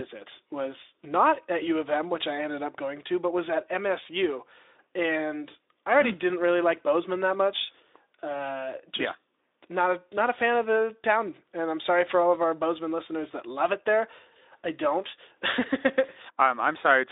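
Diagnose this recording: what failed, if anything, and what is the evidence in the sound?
Nothing failed in this recording.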